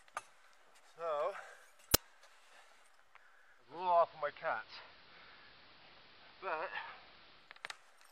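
At 1.94 s there is an uninitialised buffer: a block of about 20 ms was sent to the output before any audio had been written into it, so whatever stale values sat in that memory were played as samples. It sounds like a brief, very loud burst of harsh digital noise that cuts abruptly across the sound and is unrelated to the surrounding material.

From 3.57 s to 7.63 s the receiver shows digital radio blending to analogue. It loses the digital stream and cross-fades over roughly 0.3 s to the AM broadcast of the same station, then fades back at the end. During the AM stretch the treble is reduced, so the sound turns duller. The level drops by about 1 dB, and a steady hiss appears, sitting roughly 20 dB below the signal.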